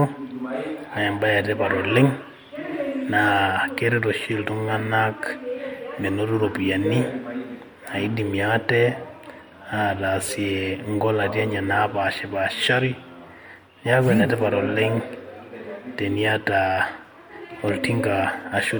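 From start to finish the speech carries generation loss: a swirly, hollow, smeared quality, with consonant attacks softened and a watery shimmer under the voice. This is likely from repeated lossy re-encoding, roughly four passes of an MP3 chain whose artefacts fit around 96 kbit/s, each pass quantising on a shifted frame grid so the damage compounds. On a spectrogram, scattered holes and blotchy patches pock the upper bands below the cut-off at about 20.1 kHz, and waveform transients look rounded.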